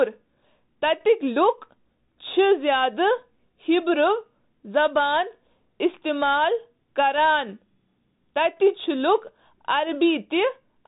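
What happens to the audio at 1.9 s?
At 1.9 s the speech is still carrying the Bluetooth CVSD headset codec distortion that runs through the whole clip. Each sample is reduced to a single up-or-down bit with an adapting step, which fits a 64 kbps link. Nothing above 3.8 kHz survives, sibilants turn scratchy, and granular hiss sits beneath the speech.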